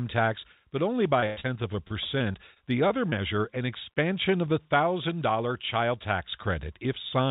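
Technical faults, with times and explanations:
1.20–1.24 s and 1.40–1.46 s, short concealed packet loss: Right after "tax but only", about 20 ms and then 40 ms of audio never arrived. The receiver extended the preceding sound to fill each hole. The result is a brief smear or wobble, then the real signal resumes.
1.26–1.38 s, burst of packet loss: About 100 ms went missing in one run, just before "of a". The decoder continued the last sound and faded it, so a held buzz or fading hiss covers the gap. There is no silence. The audio picks up later, with that stretch gone.
1.88–3.14 s, repeated packet loss (robotic sound): Between "of a" and "an expansion of the", six separate gaps occur. The longest is 24 ms, about 120 ms in all, roughly 9% of the stretch. Each is patched by continuing the last sound, giving a choppy quality with pieces missing. The G.711 call path caps the audio at about 4 kHz.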